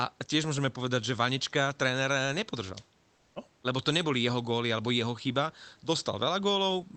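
No technical faults are audible.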